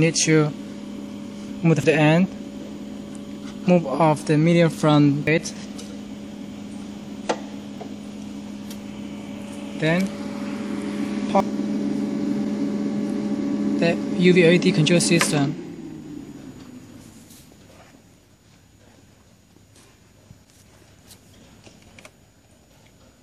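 Brief chirps or blips at 1.84, 5.27, 7.78 and 11.40 s mark damaged data in a compressed stream.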